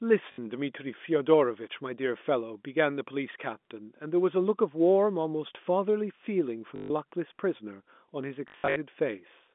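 At 0.32 s, 6.76 s and 8.48 s, the speech breaks into packet loss with the last packet repeated. The receiver replays the final good chunk until fresh audio arrives, so 60 ms, 140 ms, then 200 ms scattered across 280 ms come out as robotic stutters. A run buzzes near 50 Hz, which fits 20 ms packets. A waveform shows identical tiled segments with step discontinuities. A spectrogram shows frozen, repeating columns, all inside the intact 200 Hz to 3.5 kHz G.711 band.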